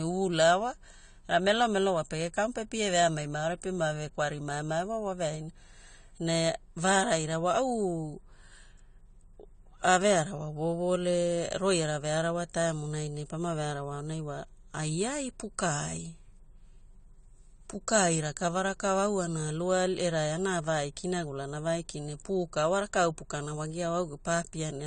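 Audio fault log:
Throughout: AAC compression. The speech has no content above 9 kHz, so it sounds dull and closed-in, and sibilants come out fizzy and smeared rather than crisp. Sustained vowels carry a warbling texture where the coder has thinned the spectrum and left gaps between bands. The damage is plainly audible, and the sound points to an AAC-LC encode at a low bitrate, around 32 kbps, as the likely cause.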